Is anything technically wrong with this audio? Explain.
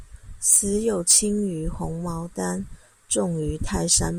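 Yes. The speech has hard clipping in four places: 0.48 to 0.59 s, 1.09 to 1.18 s, at 3.12 s, and 3.91 to 3.98 s. The peaks there were larger than the signal path could pass, by about 6, 9, 2 and 5 dB, so their tops were cut flat. Those flat tops add harmonics high up the spectrum. Each event sounds like a harsh crackle on the loud moments. The one near 1.1 s is the roughest.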